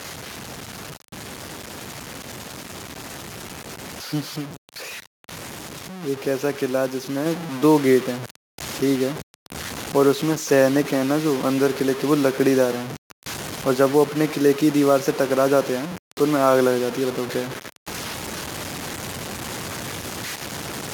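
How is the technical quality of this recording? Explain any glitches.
Technical quality is poor: a coarse grain runs through the whole recording, and there's one sudden level jump partway in.

The grit is present from start to finish. Quiet stretches sound gritty and sputtery, and the distortion shifts with the speech, sitting only about 10 dB below it. That points to low bit depth without dither, likely samples truncated to something like 5 bits.

At 7.26 s, speech and background jump up together by about 4 dB in one step. That's the microphone volume being stepped up: the call software judged the input too quiet and raised the device gain all at once.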